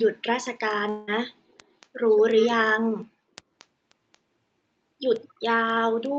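Speech over a call, with three kinds of trouble. There's an echo leak, a delayed copy of the voice trailing 230 ms behind, most likely from a far-end speakerphone whose echo canceller didn't catch everything. It turns up at 0.0, 1.49–1.87, 2.36–2.48, 3.59–3.66, 4.12–4.18 and 5.22–5.29 s, mostly about 30 dB down, nearly as loud as the voice at 2.36 s and fainter at 4.12 s. From 0.17 s to the end you get word clock ticks, sharp clicks roughly every fifth of a second. Each one is a single sample dropped or repeated as an unlocked digital receiver's clock, off by something like 150 ppm, slips against the sender's. Then at 0.89–1.09 s there's a long network dropout. About 180 ms of audio is missing and is filled by a fading buzzy continuation of the last sound, likely from the receiver's packet-loss concealment, before the speech picks up again further on with that chunk lost.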